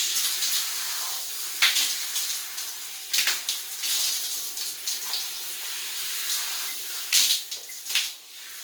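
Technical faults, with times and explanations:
Throughout: Opus compression. The audio has a grainy, rough texture, with tonal parts smeared into noise. The full range stays open, with content reaching about 20.2 kHz, so there is no muffling and little swirling. The likely cause is Opus in its CELT music mode at a low rate, which fits about 24 kbps. At that rate the encoder keeps each band's energy but fills the detail with folded or synthetic noise.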